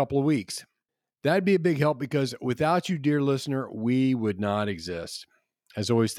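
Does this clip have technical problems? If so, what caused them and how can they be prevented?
No, nothing stood out as a technical problem on listening to this speech clip, so there is nothing here that needs preventing.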